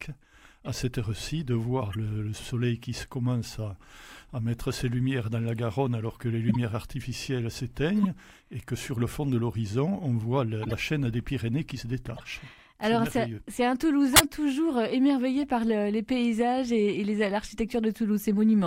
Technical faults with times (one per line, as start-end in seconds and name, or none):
0.65 corrupt frame decoded
1.93-1.95 corrupt frame decoded
6.48-6.56 corrupt frame decoded
8.03-8.05 corrupt frame decoded
10.63-10.74 corrupt frame decoded
12.17-12.22 corrupt frame decoded
14.13-14.20 corrupt frame decoded
15.43 corrupt frame decoded